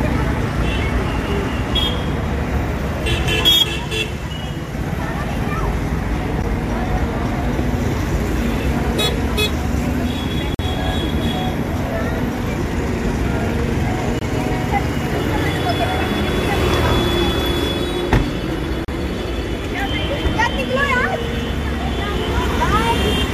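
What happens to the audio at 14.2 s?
At 14.19 s the audio drops into a block of digital silence lasting about 23 ms, until 14.21 s. The output buffer likely went unfilled, which fits a 1024-sample block, so samples fell to zero. Unlike a fade or a concealed dropout, it cuts out and back abruptly, heard as a short hole.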